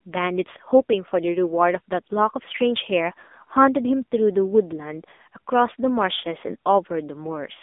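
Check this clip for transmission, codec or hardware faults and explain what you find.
One codec fault runs through the whole recording.

AMR narrowband mobile codec, throughout: the speech has been squeezed through a 2G/3G phone codec that rebuilds the voice from a vocal-tract model and sparse pulses in each 5 ms. The heavy buzzy, synthetic quality points to a low mode near 6.7 kbps. The band runs roughly 250 Hz to 3.6 kHz, with nothing above 3.8 kHz.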